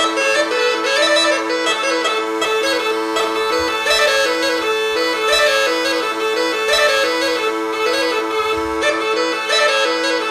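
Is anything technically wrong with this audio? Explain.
Yes. From 2.26 s to 8.77 s the audio shows crude rate conversion. The pattern points to a 48 kHz to 44.1 kHz change made by simply picking the nearest existing sample, with no interpolation filter. Samples are dropped on a fixed cycle set by that ratio, and the resulting timing error creates spurious tones that bear no harmonic relation to the material. The result is a gritty, inharmonic fizz riding roughly 25 dB below the signal, most obvious on loud and high-frequency passages.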